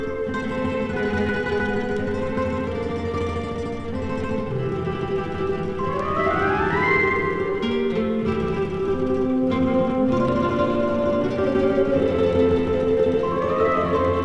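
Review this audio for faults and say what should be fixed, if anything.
Nothing here needs fixing; it all comes through without a single hitch worth chasing down.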